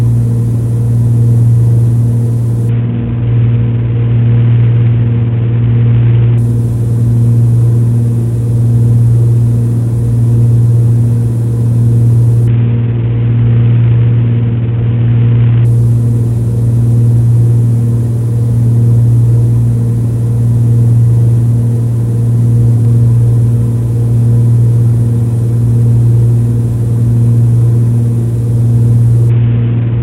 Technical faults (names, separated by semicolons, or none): Bluetooth SBC bit pool drop